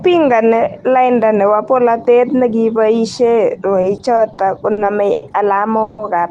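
Repeated stalls (stutter) run from 3.81 to 5.24 s: the receiver's jitter buffer ran dry six times as packets arrived late, and each gap was bridged by stretching the preceding sound, about 250 ms in total, the longest 90 ms. Nothing drops out, but the speech drags and hiccups.

A call audio freeze follows at 5.82 to 6.00 s: the sound hangs for 160 ms as a held, fading continuation of the last sound, without falling silent, then resumes where it stopped. The likely cause is packets held up in transit, briefly starving the buffer through the Opus call path.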